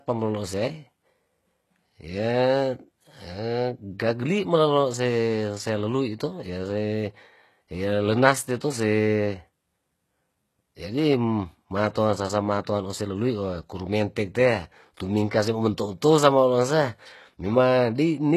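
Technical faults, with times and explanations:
Throughout, HE-AAC compression: the low-rate coder likely transmits only the lower spectrum and regenerates the treble by copying lower bands upward, with nothing above 12.3 kHz, which fits a rate near 16 kbps. The rebuilt top end's harmonics misalign, so s sounds turn gritty and lispy.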